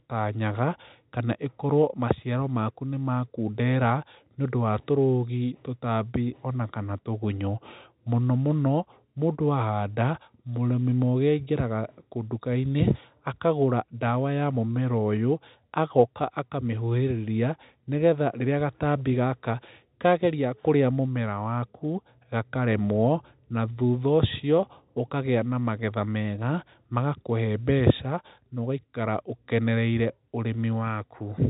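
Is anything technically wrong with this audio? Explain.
No, nothing's wrong here; it's just speech coming through an ordinary telephone line, where the G.711 telephone coding keeps the sound under about 3.8 kHz, exactly as that format is meant to.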